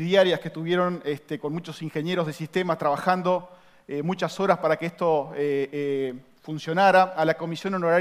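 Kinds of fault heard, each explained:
No technical faults can be heard anywhere in the audio.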